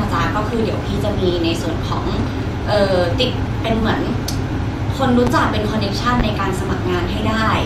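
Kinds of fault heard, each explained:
Corrupt frame concealed, 3.79 to 3.82 s: a stretch of the compressed stream arrived damaged, and the decoder patched it with muted or scrambled filler over about 30 ms, which fits roughly two lost frames.
Loud pop, 5.27 and 6.20 s: each is a single sharp pop lasting about 30 ms and peaking about 15 dB above the speech, which carries on underneath. The likely cause is a sudden voltage pulse from a plug, switch, static or driver glitch.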